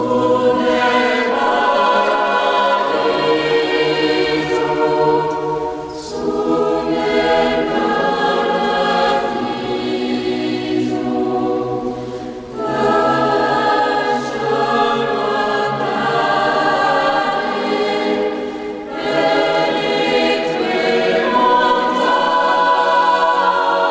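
Nothing stood out on listening; the sound carries the narrowed top end of a call path, with nothing above about 8 kHz, which fits a wideband call codec such as G.722.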